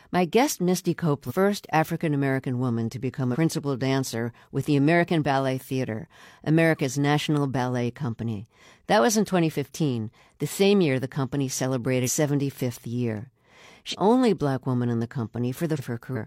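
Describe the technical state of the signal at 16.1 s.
At 16.12 to 16.17 s, compressed frames are skipped: a few whole frames are not played, so the speech jumps ahead by roughly 200 ms. A spectrogram shows an abrupt content discontinuity.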